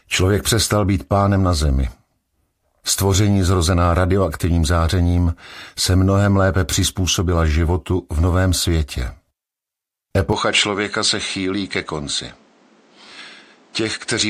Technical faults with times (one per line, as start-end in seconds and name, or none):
10.33-14.29 input switched to a poorer device